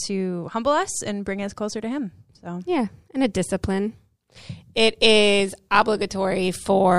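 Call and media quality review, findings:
No faults found: the speech signal shows no dropouts, distortion, timing errors or level problems across the recording.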